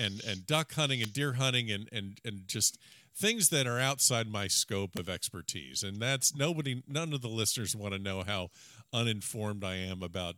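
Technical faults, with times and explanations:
1.04 s and 4.97 s, electrical switching spike: a sharp little snap sits on top of the speech, once just after "and duck hunting" and again after "are outside my scope". Each is a brief arc, likely from a nearby switch or motor, that the line picked up, peaking around -20 dBFS.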